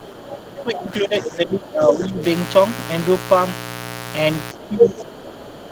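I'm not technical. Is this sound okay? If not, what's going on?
No. There are three problems.

The first is a mains buzz that runs through the whole clip. It is a steady, raspy hum that is fairly loud next to the speech. It comes from the electricity supply, which here runs at 60 Hz. Sharp electrical spikes from something like a dimmer, a power adapter or a poorly shielded cable get into the audio. They carry tones at many multiples of that 60 Hz rate, which is why the buzz sounds gritty rather than smooth.

The second is speech suppressed in double talk. It happens twice. From the start to about 2.24 seconds, and again from about 4.53 seconds to the end, the speech dips and sounds held back. In the first stretch it sinks quite far at its worst. This is likely because someone on the other end of the call was talking at the same moment. The system that removes echo could not tell the two voices apart, so it turned everything down.

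The third is the other side's voice leaking through, between about 0.78 and 0.82 seconds. A brief, faint scrap of a second voice slips in, well below the main speech. This likely happened because the other person's voice was playing from a loudspeaker near the microphone. The echo removal did not catch all of it, so a short fragment was picked up and sent along.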